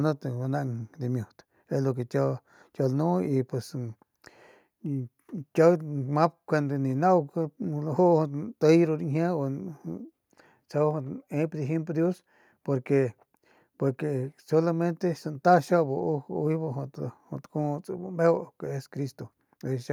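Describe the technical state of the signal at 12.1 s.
At 12.1 s the speech signal is intact, with no technical fault present at that moment.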